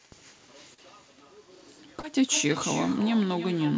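Across the whole recording the speech carries an echo with no canceller. On the far end the call was played over a loudspeaker, the microphone there picked it up again, and nothing subtracted it, so each phrase returns roughly a third of a second later, about 13 dB quieter and thinner. Unlike room reverberation, which smears into a continuous tail, this is a distinct, late second copy trailing the talker.

Two short concealed packet losses follow, from 0.74 to 0.80 s and from 2.00 to 2.05 s. Each time about 40 ms of audio failed to arrive, and the decoder patched the hole by extending the preceding sound for roughly 35 ms before crossfading back into real audio. The result is a brief smear or wobble rather than silence, which separates it from a plain dropout, where the sound would simply cut out. Both land in a band-limited signal with nothing above 8 kHz, consistent with a G.722 call codec.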